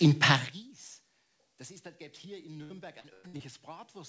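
From 0.34 to 0.72 s a fast ticking zip rides the sound as it drops roughly 25 dB: zipper noise, the fade stepped about 150 times a second without smoothing. Between 2.58 and 3.41 s the audio turns choppy and robotic, breaking up repeatedly. This is repeated packet loss, with holes up to about 100 ms patched by stretching earlier sound, covering roughly a third of that stretch.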